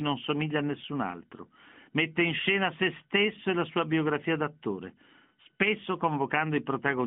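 Nothing stood out as a fault on listening to this speech recording.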